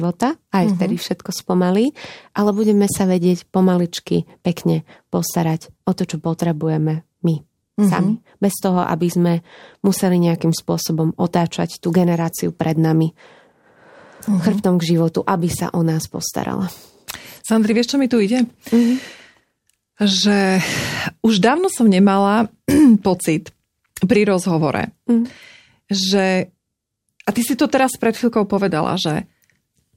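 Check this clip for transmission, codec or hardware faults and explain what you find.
Nothing in this speech recording points to a transmission, codec or hardware fault.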